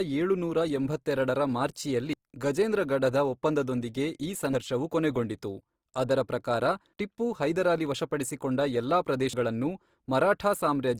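Throughout, the speech sounds grainy and rough, the likely result of Opus compression in its music mode. The damage is plainly audible, consistent with a low bitrate near 24 kbps.

At 2.13, 4.53 and 9.33 s, the speech skips forward, losing about a tenth of a second each time. This is likely audio missing between chunks of 2.5 s.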